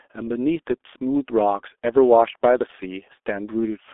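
From start to finish the speech runs through a G.723.1 codec, badly mangled. Nothing reaches above 3.6 kHz or below 300 Hz, the voice model updates sluggishly, and the result is muffled and hoarse with smeared consonants, which fits a bitrate around 6 kbit/s.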